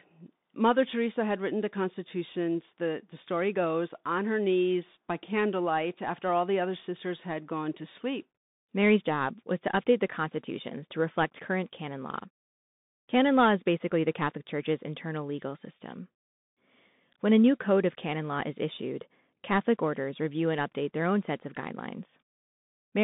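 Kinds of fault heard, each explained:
Bluetooth CVSD headset codec: the speech sits in a narrow 150 Hz to 3.7 kHz band, and the one-bit up-or-down coding, which fits a 64 kbit/s headset link, leaves plainly audible granular hiss and scratchy sibilants, unlike clean band-limiting, which narrows the sound without adding grit.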